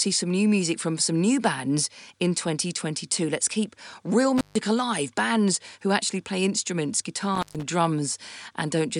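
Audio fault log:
4.38–4.59 s and 7.35–7.63 s: intermittent contact. The speech drops out for about 145 ms and 126 ms with crackle at each edge and faint hiss during the gap, as a loose plug or cable conductor briefly opens and then reconnects.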